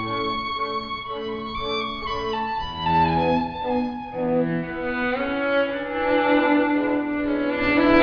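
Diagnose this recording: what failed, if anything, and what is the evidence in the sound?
Nothing in the signal chain fails audibly: no stage from analogue wiring through conversion, buffering, processing, transport or playback leaves a trace in the sound.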